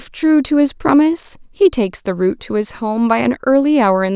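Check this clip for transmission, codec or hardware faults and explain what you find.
Nothing to flag here: I listened for transmission, codec and hardware trouble in this speech clip and none turned up.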